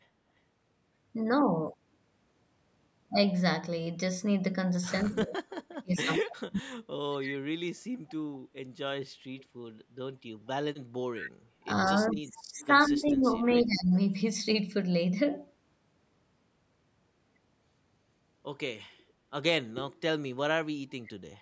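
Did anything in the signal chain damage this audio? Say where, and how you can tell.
Yes, and it all happened in the call processing. From 5.04 to 6.75 s, 11.65 to 13.93 s and 20.6 to 21.19 s, the speech dips hard, by up to about 40 dB, 20 dB and 35 dB. That's likely speech suppressed in double talk: the echo canceller couldn't separate the near talker from the far end and ducked both.

There's also echo leak, a faint copy of the speech trailing 173 ms behind. Short scraps turn up at 7.23, 9.39 and 11.2 s, about 15 dB down except around 30 dB at 9.39 s. A longer stretch runs from 12.07 to 13.11 s. The likely cause is that the far side's loudspeaker echo got past its canceller and came back.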